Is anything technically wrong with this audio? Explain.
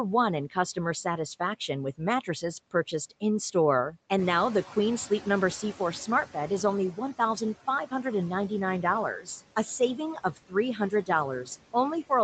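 Yes. Throughout, the background sinks between phrases and swells under the speech. These are noise suppressor artifacts: a frame-by-frame gain cutting the noise by about 17 dB.

From 4.18 s to 6.83 s, the room noise jumps by about 11 dB just after 4 s and comes through louder, then sinks. This is the noise suppressor catching up: its noise estimate needed 2.65 s to adapt, reaching only about 10 dB of reduction during that stretch.

At 10.15 to 10.55 s and again at 10.75 to 11.09 s, parts of the speech, about a tenth of a second in each, sound swallowed and faint. This is speech cut by the noise suppressor, which mistook those sounds for noise and dipped them by about 16 dB and about 14 dB respectively.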